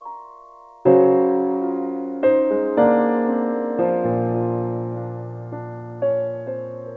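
No faults are audible in the music, which has nothing above 8 kHz, consistent with a normally working G.722 wideband call path at about 64 kbps.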